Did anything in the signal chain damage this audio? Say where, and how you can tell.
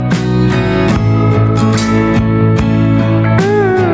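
Yes. Gain pumping runs through the whole clip: the gain swings by around 10 dB, squashing the dynamics. The likely cause is input gain set far too high, with a fast limiter repeatedly clamping it. A noise gate would cut the gaps to silence rather than lift them.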